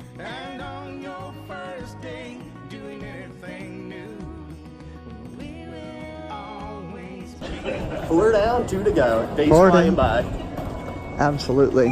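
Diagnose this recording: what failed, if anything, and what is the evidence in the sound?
Nothing here points to a failure at any stage of the chain, and the recording can be taken as it stands.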